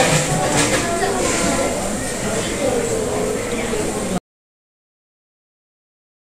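The input feed was most likely lost at 4.18 s, from a disconnected device, a dropped link or an accidental mute, while the recorder kept writing silence. This recording of sounds therefore shows an audio dropout to silence: the sound stops abruptly in mid-flow at 4.18 s and never returns, leaving about 2.2 s of complete silence, with no room tone at all, running to the end of the clip at 6.34 s.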